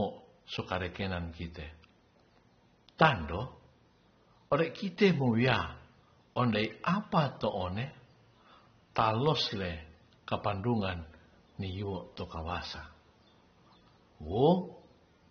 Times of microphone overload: none

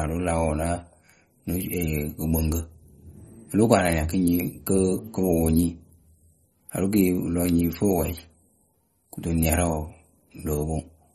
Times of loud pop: none

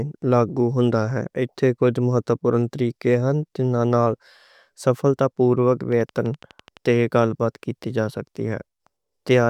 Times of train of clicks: 5.92-6.87

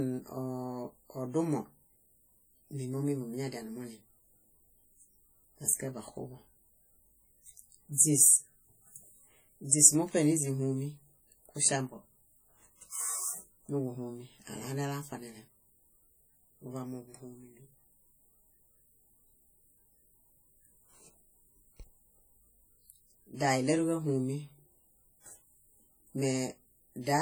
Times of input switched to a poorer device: none

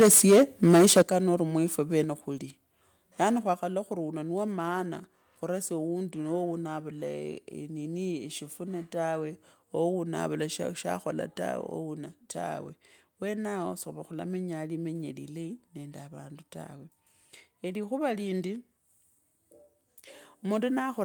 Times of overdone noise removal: none

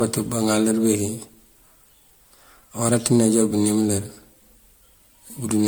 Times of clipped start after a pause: none

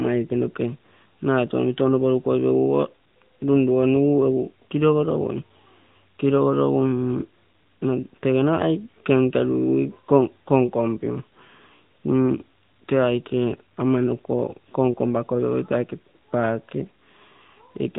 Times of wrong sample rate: none

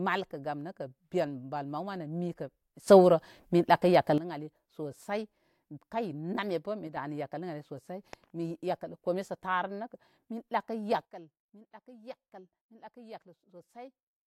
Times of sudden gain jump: 2.88-4.18, 6.87-6.97, 11.05-14.26

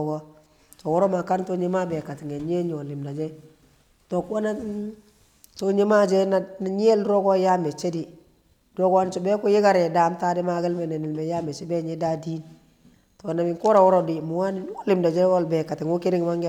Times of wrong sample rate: none

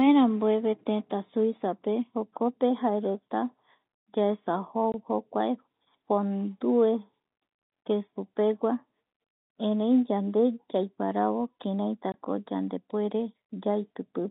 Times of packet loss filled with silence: 4.92-4.94, 12.12-12.14

